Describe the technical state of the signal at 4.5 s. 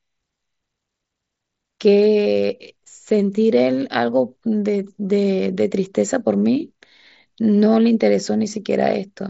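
At 4.5 s the signal is intact, with the speech carried cleanly through the wideband mSBC Bluetooth headset link and no fault present at that moment.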